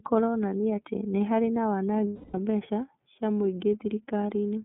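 From start to end the speech sounds thin, boxed-in and slightly rough and synthetic, with nothing above about 3.7 kHz or below 150 Hz. That is the iLBC codec, a narrowband VoIP coder working in 30 ms frames, and its plainly audible coding damage fits its 13.33 kbps mode.

From 2.07 to 2.35 s the voice turns into a held, faintly buzzy, breathy vowel that fades before normal speech snaps back. These are lost iLBC frames. For 270 ms, which fits nine missing 30 ms frames, the decoder filled the gap by repeating the last pitch cycle mixed with noise. Because each frame decodes on its own, the voice recovers almost at once.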